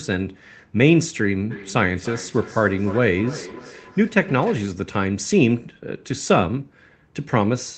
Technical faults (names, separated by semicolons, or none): feedback echo between two devices